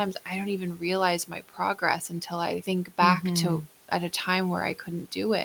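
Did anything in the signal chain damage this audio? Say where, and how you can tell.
Yes. From 1.28 to 1.59 s, around 150 ms of speech turns faint and swallowed, dipping about 12 dB: the noise suppressor in call processing cut speech it mistook for room noise.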